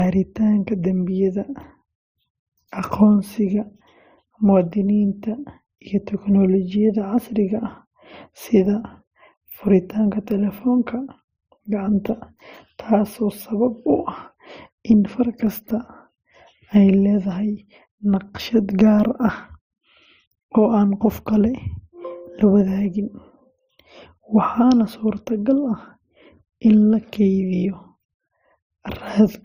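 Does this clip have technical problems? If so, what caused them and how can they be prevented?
Yes. Throughout the speech there is a hard ceiling at 15.6 kHz, with nothing above it, and two distinct kinds of coding damage heard at once: the smeared, swirly highs of a low-rate MP3 overlaid with a second codec's texture. This points to transcoding between lossy codecs, likely a roughly 34 kbit/s MP3 re-encoded to Opus at about 48 kbit/s, where Opus spent bits reproducing the MP3 artefacts and added its own. To prevent it, encode once from the original uncompressed source straight to the delivery format.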